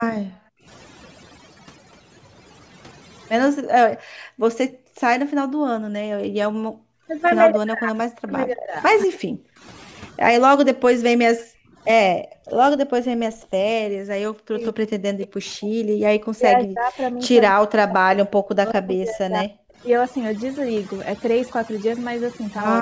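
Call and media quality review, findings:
Overdone noise removal, whole clip: twinkling specks in a near-silent background. On the spectrogram, isolated bins flicker on and off, the noise floor is blanked, and weak speech harmonics are cut away between formants.

Speech suppressed in double talk, at 0.20–0.24 s, 4.13–10.81 s and 12.7–19.56 s: speech dips, dulls or drops out in pieces, down by roughly 40 dB. The likely cause is an echo canceller clamping the near talker during simultaneous far-end speech. The waveform shows chopped envelopes, and the spectrogram shows the top end vanishing.

Background gated by the echo canceller, at 0.52–0.66 s, 3.52–7.08 s and 11.11–12.42 s: room tone drops by about 40 dB while the loudspeaker plays and returns on release. These show as flat gaps in the waveform and as dark vertical blocks across the band, with no content above 8 kHz at any time.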